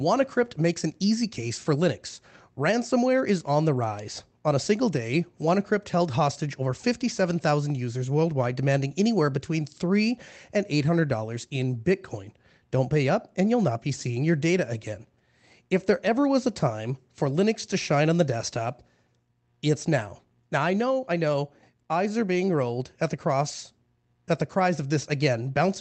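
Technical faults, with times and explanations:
No technical faults were found in this speech clip.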